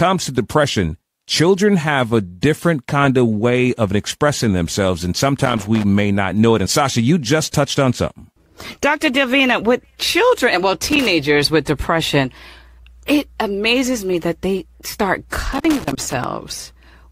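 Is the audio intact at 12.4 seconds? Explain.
Yes, the speech at 12.4 seconds is intact, with no audible dropout, click, distortion or other fault at that moment.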